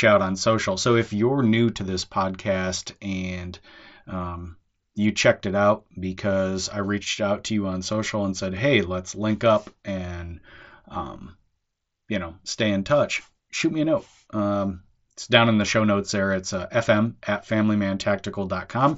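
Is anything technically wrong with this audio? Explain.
No, nothing stood out on listening to this speech recording.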